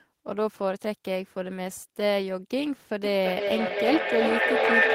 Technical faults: feedback howl

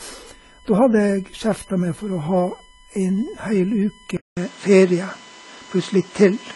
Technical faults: USB whine; low-bitrate audio saved at a high bitrate; input switched to a poorer device

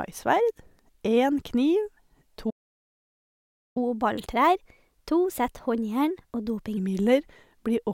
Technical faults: playback stall; catch-up at higher speed

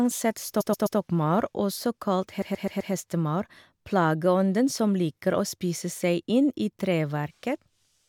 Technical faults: repeated frames

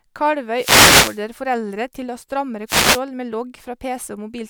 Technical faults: wireless microphone noise hit

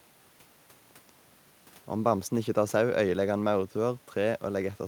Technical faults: none

